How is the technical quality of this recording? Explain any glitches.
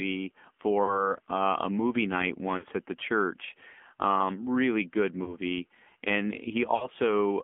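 The recording is poor technically. It is narrowband mobile speech with plainly audible codec damage and four brief dropouts.

AMR narrowband mobile codec, throughout: the sound is confined to roughly 200 Hz to 3.4 kHz, and a sparse pulse-driven vocal-tract model rebuilds the speech. Its buzzy, synthetic texture fits a low 7.4 kbps mode.

Lost AMR speech frames at 0.84–1.15 s, 2.58–2.66 s, 5.24–5.37 s and 6.76–6.87 s: damaged frames failed their checks, so the decoder repeated its last good pitch and filter settings at falling gain. About 40, 60, 20 and 60 ms were lost, heard as smeared, fading warbles before the speech returns rough.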